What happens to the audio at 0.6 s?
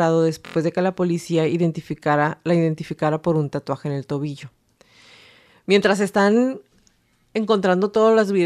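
A repeated buffer runs from 0.46 to 0.56 s, just before "de que la policía". A block of about 23 ms, which fits a 1024-sample buffer, plays four extra times because new audio arrived late, giving a rapid buzzy stutter. On a waveform, identical segments repeat with abrupt joins; on a spectrogram, vertical seams appear at each join.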